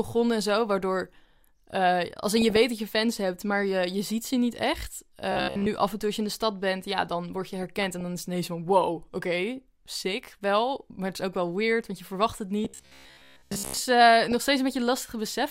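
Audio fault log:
2.37–2.57 s, 7.35–8.01 s and 14.25–14.44 s: DAB burbling. The longest patch is the one at 7.35–8.01 s. Weak reception let bit errors slip past the error correction into the MP2 audio data. Corrupted samples then put short blips of noise into single sub-bands, and corrupted scale factors made sub-bands leap in level for up to a frame. The density of the disturbance points to an error rate of a few tenths of a percent.
5.32–5.68 s and 12.65–13.81 s: robotic sound from repeated short buffers. The speech collapses into a stiff, metallic buzz at 66.8 Hz that still roughly tracks the syllables. The second stretch lasts over a second. The likely cause is new audio arriving too rarely, so playback loops the last fragment of about 15 ms while most of the real audio is skipped. That repetition period imposes the fixed buzz pitch.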